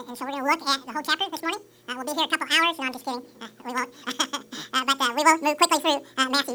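From start to finish the audio is read two samples at a time (double speed): the reader treats each pair of samples as a single frame, as if the stream had two channels or wider samples, so it plays at 2x speed and a full 12 semitones higher. Unlike a plain sample-rate mismatch, which speeds things up cleanly, every other sample is skipped with no filtering, so any strong content above a quarter of the sample rate folds back.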